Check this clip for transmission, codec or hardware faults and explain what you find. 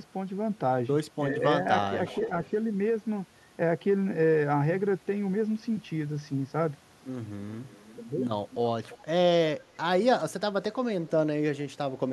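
Two kinds of fault are audible in this speech, both pointing to echo cancellation on a speakerphone call.

Speech suppressed in double talk, 1.29 to 1.42 s: the voice dips by about 10 dB. This is likely the canceller turning down the talker while both sides spoke.

Echo leak, 2.06 to 2.24 s, 2.44 to 2.49 s and 8.9 to 8.98 s: faint delayed copies of the voice return, about 20 dB down, then about 35 dB, then about 20 dB. The delays are 361 ms, 361 ms and 336 ms. These are likely residual loudspeaker echo that the canceller did not fully remove.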